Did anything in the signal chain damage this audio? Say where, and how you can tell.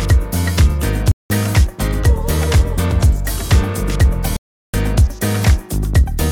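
Yes: blocks of digital silence at 1.12–1.30 s and 4.37–4.74 s, at the driver or buffer stage. The waveform drops abruptly to silence, fitting unfilled 8192- and 16384-sample buffers. The spectrogram shows blank gaps with vertical edges.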